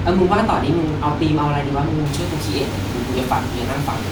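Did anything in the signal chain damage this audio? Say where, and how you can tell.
Yes. Pre-emphasis left on from 2.06 s to the end: the speech turns thin and sibilant, with treble about 13 dB hot at 10 kHz, matching a missing FM 75 µs de-emphasis.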